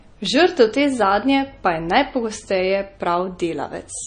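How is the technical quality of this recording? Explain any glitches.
The quality is poor, with plainly audible codec damage across the whole speech clip. MP3 compression, throughout: the encoder was likely starved of bits, so nothing survives above 9.4 kHz and weak components drop out. The speech sounds dull and watery, which fits a bitrate around 32 kbps.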